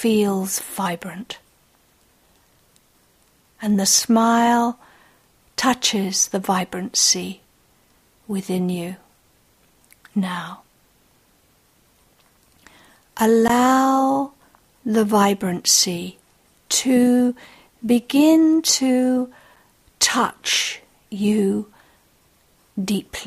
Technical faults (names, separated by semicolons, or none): block of digital silence